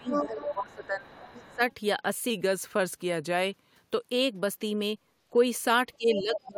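From the start to 1.09 s the speech sinks by up to about 20 dB, and again from 1.46 to 1.61 s and from 5.97 s to the end. This is speech suppressed in double talk, likely an echo canceller ducking the talker while both sides spoke at once.

Over the same opening stretch, a second voice breaks in: from 0.04 to 0.27 s at about the talker's level, 0.45 to 0.54 s about 5 dB down, 0.71 to 0.87 s about 30 dB down, and 1.07 to 1.75 s about 20 dB down. It returns from 6.15 to 6.47 s, about 5 dB down. This is the other side's voice leaking through, likely loudspeaker playback the canceller failed to remove.

From 2.30 to 3.87 s the speech slows by 5.65% and drops 101 cents, about a semitone. This is a drift correction step, likely a clock-matching resampler changing rate in one jump.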